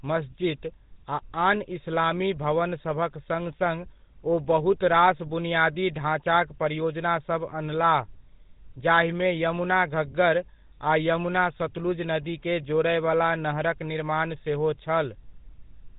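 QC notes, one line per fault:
Throughout, GSM full-rate codec: the speech has a plainly audible buzzy, gravelly roughness and a narrow, boxy tone with nothing above 3.8 kHz. The coder models the vocal tract and excites it with sparse regular pulses, and its low data rate fits the 13 kbps full-rate mode.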